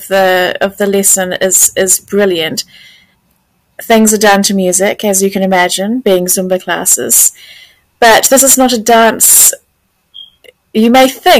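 Hard clipping runs right through: the signal's driven about 17 dB past what the stage can pass, so roughly 7 percent of samples get flattened, giving harsh fuzz on every loud moment.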